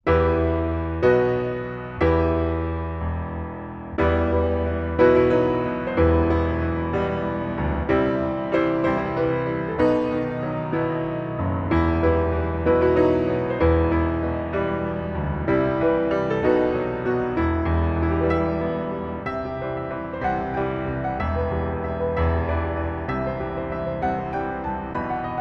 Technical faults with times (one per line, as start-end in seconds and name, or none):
none